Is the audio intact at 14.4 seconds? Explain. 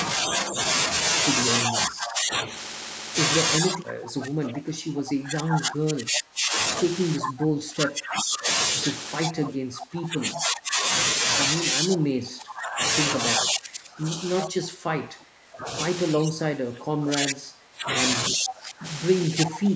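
No. From 11.79 s to the end, the echo canceller was likely overwhelmed by both sides talking at once and could not tell the near talker from loudspeaker echo. It pulled the whole signal down, causing speech suppressed in double talk: the sound dips by as much as around 30 dB, for about five seconds in all.

Inside that span, from 14.41 to 14.45 s, a loudspeaker echo was likely not fully cancelled. This echo leak returns a brief copy of the sound 378 ms late, roughly 10 dB below the main speech.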